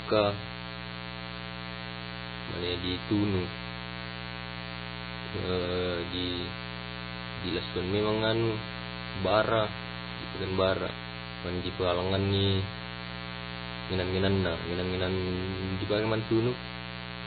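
A mains buzz at 60 Hz runs through the whole recording, only about 10 dB below the speech. Switching spikes twice per mains cycle spread harmonics into the kilohertz range, giving a steady, raspy buzz.

Nothing is heard above 4.5 kHz, and the damage is heavy: watery, swirling speech with smeared attacks. The likely cause is MP3 compression at a very low bitrate, around 16 kbps. Starved of bits, the encoder drops weak frequency lines and cuts the treble.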